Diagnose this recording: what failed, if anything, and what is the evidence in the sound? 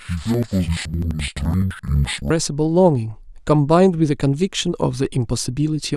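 Interleaved audio read as planar, a sample-format conversion fault, runs from 0.00 to 2.35 s. The speech drops an octave and sounds doubled and choppy. It stutters at about 11.7 Hz, once every 85.33 ms, which fits a 2048-sample block. Each block holds alternating left and right samples. The reader took the first half as left and the second half as right. Each channel therefore plays its share at half speed, in parallel, so the pace holds.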